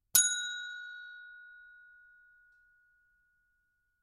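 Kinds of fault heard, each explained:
No technical faults can be heard.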